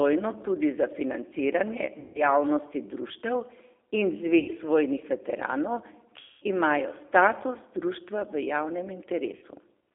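Throughout the speech, the G.729 codec is plainly audible. The 8 kbit/s coder rebuilds each 10 ms frame from a vocal tract filter, a pitch predictor and a few pulses, so voicing comes out slightly rough and synthetic. The line band runs from 300 Hz to 3.6 kHz, which removes the low body and all the upper detail. The result sounds thin and boxy, the way a narrowband VoIP call does.

VoIP packet loss concealed by the speech codec occurs four times: from 2.0 to 2.24 s (150 ms lost), 4.39 to 4.51 s (90 ms), 6.2 to 6.44 s (210 ms) and 9.36 to 9.45 s (60 ms). The lost audio in each gap fits roughly five, three, seven and two 30 ms packets. During each gap the decoder keeps repeating its last pitch and filter while the gain drops frame by frame, so the sound is stretched into a buzzy tone or coloured noise that fades. Because every frame builds on the one before it, the speech stays weak or distorted for a short stretch after real packets resume.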